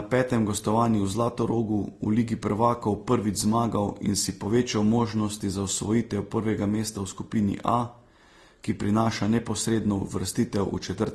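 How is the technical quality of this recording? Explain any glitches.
Technical quality is reduced by one fault present throughout the speech. Transcoding between lossy codecs: the sound is smeared and swirly with a hard ceiling at 12.2 kHz, likely from low-bitrate Vorbis re-encoded to Opus. A spectrogram shows an empty band above that line and blotchy, stacked artefacts.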